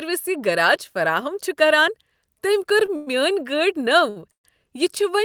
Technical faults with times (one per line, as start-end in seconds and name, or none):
2.86-2.90 short stall from a late packet
2.96-3.09 call audio freeze
4.10-4.18 short stall from a late packet
4.32-4.46 call audio freeze